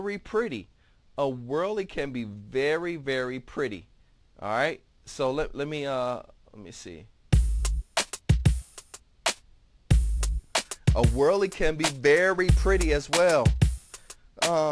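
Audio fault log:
throughout: aliasing. Content above 11 kHz folds back below that edge, landing at unrelated pitches around 20 dB under the signal and giving the top end a gritty, metallic cast. This fits a drop to about 22 kHz with no filter beforehand. A spectrogram shows energy running hard up to 11 kHz, with mirrored, inverted-slope components.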